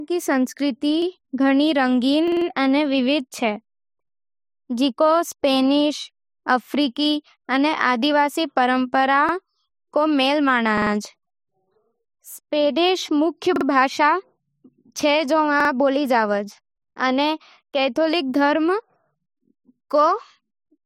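Speech with repeated buffer stutters at 1.02, 2.28, 9.29, 10.77, 13.56 and 15.60 s. Each replays a 46 ms piece one to four times with hard joins, which fits a 2048-sample buffer starved of new audio.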